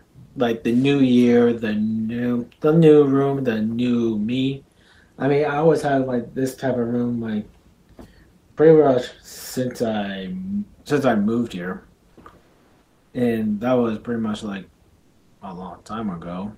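Between 0.27 and 0.35 s, 12.43 and 13.11 s, and 14.99 and 15.39 s, comfort noise in place of the background is heard. The real background, about 36 to 40 dB below the loud parts, gives way to flat, featureless hiss. It is about 5 dB louder in the first gap, about 5 dB quieter in the second, and about 2 dB quieter in the third. The likely cause is Opus discontinuous transmission, where the receiver synthesises filler noise while the sender pauses. Unlike a noise gate, the gaps are filled with noise rather than left silent.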